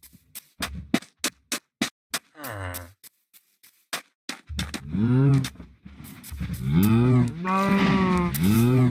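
At 1.88 s the sound halts abruptly and stays silent for about 215 ms, returning at 2.11 s. This is a playback stall, most likely the player running short of data or its output thread being held up until it could feed the device again. Unlike a dropout, a click-length gap of a few milliseconds, this pause lasts long enough to register as a distinct hole in the flow. The silence is clean rather than noisy or looped.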